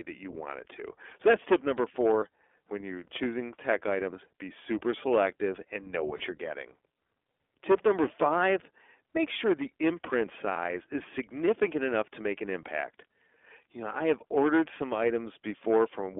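The whole speech recording passes through the iLBC codec, with the line band limited to roughly 300 Hz to 3.5 kHz. Coding the excitation frame by frame, at a rate that fits the 15.2 kbps mode with 20 ms frames, leaves the voice plainly rough and slightly synthetic, with no content above 3.5 kHz.

Lost iLBC frames occur three times. In each, the decoder bridges the gap by repeating the last pitch cycle mixed with noise. At 2.20 to 2.23 s, after "that's tip number" and before "when you're choosing tech", this produces a short, held, buzzy vowel that fits one missing 20 ms frame. The same happens at 6.18 to 6.22 s, between "super selective and know" and "you're getting". At 10.53 to 10.57 s, after "make sure the imprint", the held sound lasts about 40 ms, which points to two lost frames, before "is significant enough to" returns cleanly.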